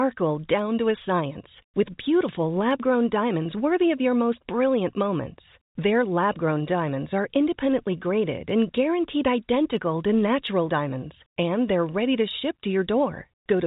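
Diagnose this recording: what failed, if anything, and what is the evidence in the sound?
Clock slip clicks at the converter or clock-domain boundary: from 0.17 s to 13.58 s the speech carries faint ticks at a steady interval of roughly 0.15 s, about a hundred in all, loudest on sustained voiced sound and gone in pauses. This is likely two free-running clocks disagreeing by roughly 150 ppm, each slip dropping or repeating a single sample. Packet loss or buffer underruns would be irregular and leave gaps. This rhythm stays steady, within the telephone band that ends near 3.8 kHz.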